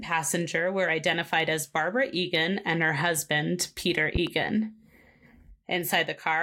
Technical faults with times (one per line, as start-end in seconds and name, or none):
4.15-4.30 loud pop